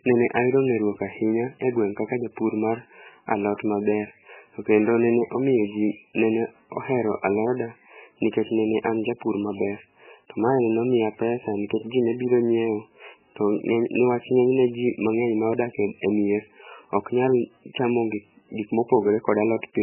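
From start to finish the speech has a hard ceiling at 3 kHz and a watery, swirly texture, with sibilants chirping and consonant onsets smeared. That's heavy damage, likely from MP3 compression starved at a very low bitrate, around 8 kbps, zeroing faint detail frame by frame.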